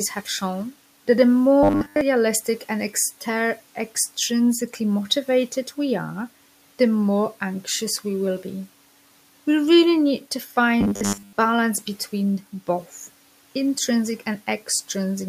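At 1.63 s, just after "have shown that the", the speech turns into robotic sound from repeated short buffers. It lasts until 2.01 s. It returns from 10.81 to 11.34 s, after "really need to" and before "between both intrinsic". Both times a rigid, metallic buzz at 100 Hz rides on the voice. That fits a 10 ms chunk replayed over and over, likely because new audio arrived too late. Most of the real audio there is skipped.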